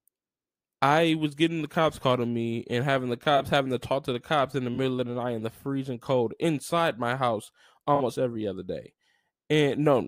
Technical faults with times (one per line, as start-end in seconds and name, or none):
3.37-3.41 corrupt frame concealed
4.74-4.77 corrupt frame concealed
7.95-8.01 corrupt frame concealed